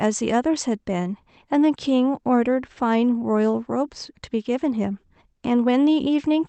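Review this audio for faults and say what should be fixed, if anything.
Nothing needs fixing: the speech comes over the WebRTC call path with its top end stopping near 8 kHz, as expected from the call codec, and no fault is present.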